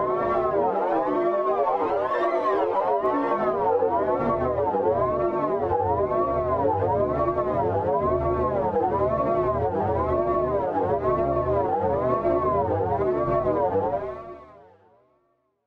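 A single sharp tick at 3.06 s cuts through the sound, bright and broadband, with no relation to what surrounds it. It is a bit error spike: one flipped bit knocked a single sample to about -33 dBFS before the next sample snapped back.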